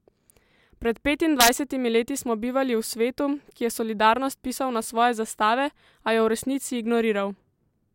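At 1.41 to 1.49 s, just before "leti smo bivali v", integer overflow hits. Peaks about 2 dB too hot wrap to the opposite sign. Violent cracks result.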